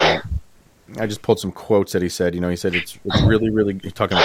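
From 3.03 to 3.2 s, and again from 3.41 to 3.68 s, the speech drops by around 10 dB. This is likely speech suppressed in double talk. Both sides spoke together. The echo canceller mistook the talker for echo and turned everything down.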